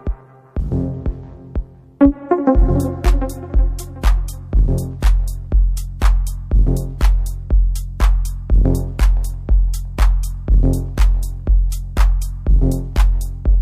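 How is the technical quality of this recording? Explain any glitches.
Pre-echo is the recurring glitch here: five sharp attacks each arrive with a short hiss just ahead of them, at 4.02, 5.01, 5.99 to 6.01, 6.99 to 7.01, and 11.70 to 11.72 s. The transform codec spreads its quantisation noise across the whole block, so noise meant for the loud attack leaks into the quiet before it. It rises about 10 to 19 dB over 15 to 22 ms, which fits fixed 36 ms blocks with no switch to short ones. The attacks come across softened and smeared.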